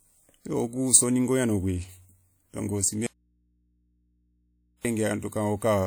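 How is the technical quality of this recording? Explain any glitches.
The recording has one clear fault, an audio dropout to a faint residue. From 3.06 s to 4.85 s the speech cuts out abruptly for about 1.8 s, leaving only mains hum roughly 40 dB below the speech level. The likely cause is a break in the signal feed while the input after it stayed live and picked up hum from the open connection.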